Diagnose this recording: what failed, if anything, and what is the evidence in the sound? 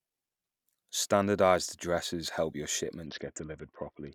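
Codec stage, specifically a Bluetooth SBC bit pool drop: from 3.06 s to the end of the speech at 4.14 s the treble dulls abruptly and a gritty quantisation noise rises. The sound points to the bit pool falling from about 31 to 6, near 55 kbps, starving the upper sub-bands and coarsening the rest.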